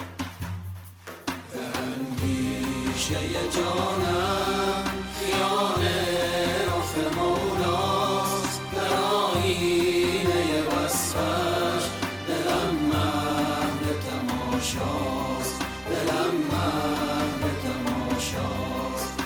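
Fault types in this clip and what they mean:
No fault types appear in this clip, so there is nothing to list or explain.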